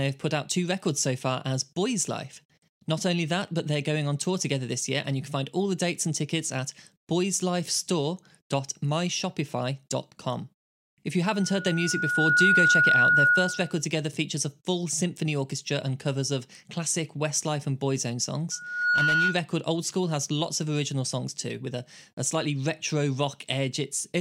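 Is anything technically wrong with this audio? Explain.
Yes. There are two bursts of loudspeaker feedback squeal in the speech. The first runs from 11.23 to 13.83 s, ending just before "together features a full". The second runs from 18.51 to 19.45 s. Both lock onto a 1.4 kHz tone. Sound from the loudspeaker reached the microphone feeding it, and at 1.4 kHz the loop gain went above unity. The tone swells over about a second in the first burst, to roughly 10 dB above the speech. In the second it rises faster and peaks around 5 dB above.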